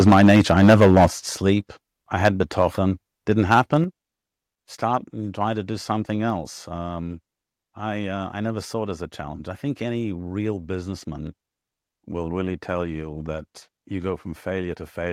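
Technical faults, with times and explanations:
0.0–1.06 s, 2.25–2.42 s and 3.31–3.77 s: microphone overload. The opening second, up to "sleep I", runs about 11 dB past the converter ceiling, with roughly 15 percent of samples flattened. The later bursts, just after "sleep I" and near 3.3 s, exceed it by about 4 dB and 5 dB. The flat-topped peaks give a harsh crackle, likely from the input gain being set too high.
0.09 s, 1.08 s and 3.84 s: microphone volume stepped down. The level drops abruptly by about 2 dB, then about 9 dB just before "sleep I", then about 6 dB, each shortly after distorted peaks. Voice and background fall together, likely because the call software cut the microphone's input gain in single steps.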